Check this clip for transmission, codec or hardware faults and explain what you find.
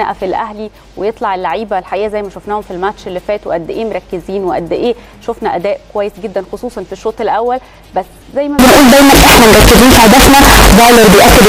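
One fault is present: from 8.59 s to the end of the clip at 11.49 s, the audio abruptly turns extremely loud and harsh. This is float read as integer, likely 32-bit float samples interpreted as 32-bit integers, so each value is governed by its sign and exponent bits rather than its true amplitude. The waveform becomes a near-square block sitting at a nearly fixed, high level, and the spectrogram fills with dense broadband energy. Background noise rises to match the main sound, though its pitch remains traceable.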